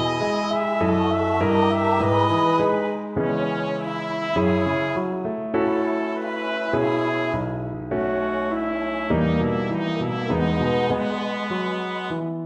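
Clock drift between sender and receiver runs through the whole clip. The sending side's clock is fast by something like 5 percent, so audio arrives quicker than the receiver plays it out and the jitter buffer keeps filling. To stop it overflowing, the receiver has to discard short slices as it goes, which gives the sound a faintly uneven pace and small timing hiccups at irregular intervals rather than one clean break.

Repeated timing corrections can be heard from 2.57 to 8.73 s, where playback runs at about 102 percent speed. The receiver trims small pieces out of the stream in a steady series, all in the same shortening direction but spaced unevenly. Each cut is slight, heard as a tiny skip or a slightly hurried tempo. From 12.17 to 12.44 s the correction is far more aggressive, at roughly 159 percent.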